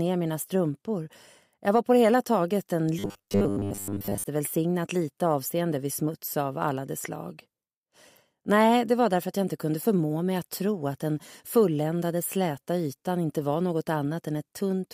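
Robotic sound from repeated short buffers appears from 2.99 to 4.24 s, a rigid 100 Hz buzz most likely caused by replaying roughly 10 ms chunks while most new audio is skipped.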